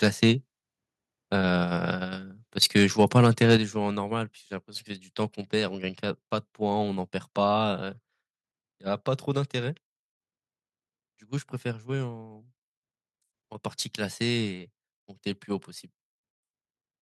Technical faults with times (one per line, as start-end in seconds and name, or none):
0.03-0.30 microphone overload
2.62-3.56 microphone overload
3.57 microphone volume stepped down
14.46 microphone volume stepped down